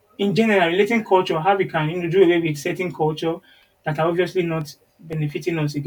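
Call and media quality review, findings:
CD scratch ticks, speech, 4.61–5.30 s: five short ticks, longest about 3 ms, roughly seven per second. Disc read path: a surface scratch defeats error correction once per revolution, and the player conceals the lost samples by interpolation or muting.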